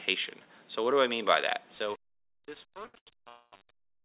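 From 1.74 s to the end at 4.04 s, the fade-out runs into truncation distortion. The gain stage drops resolution to what behaves like 7 bits, with no dither to smooth the rounding. As the level sinks toward the smallest step, the waveform collapses into coarse square steps. The tail turns gritty and granular.

At 2.86 to 2.96 s and again at 2.98 to 3.09 s come two short stalls from a late packet. Each time the jitter buffer ran dry before the next packet arrived, so the receiver stretched the last sound to bridge the wait, about 79 ms the first time and 88 ms the second. Playback then resumed exactly where it stopped. Nothing is lost, but the sound briefly hangs on itself with a faint buzzy, slightly dipped quality.

From 3.29 to 3.54 s there is a call audio freeze lasting 234 ms, likely caused by packets held up in transit, which emptied the buffer for longer. The receiver carries the last sound forward as a fading buzz, which falls to about 30 ms of outright silence before the audio picks up from the same point. 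The effect is an inserted gap rather than a cut. All of this sits on a band-limited call path with nothing above 4 kHz, consistent with G.711 A-law at 64 kbps.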